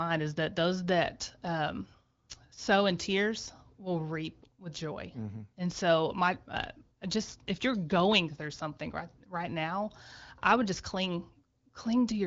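No audible technical faults.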